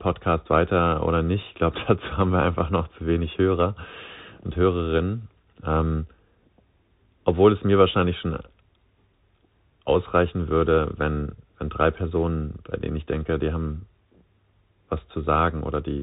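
From start to finish the speech carries the sound of a Bluetooth CVSD headset codec, and the damage is plainly audible. CVSD sends one bit per sample saying only up or down, with an adapting step size, which fits a 64 kbps link. Nothing above 4 kHz survives, so the speech sounds narrow and boxed in. Loud high-frequency sounds outrun the step and distort, s sounds turn scratchy, and a granular hiss sits underneath.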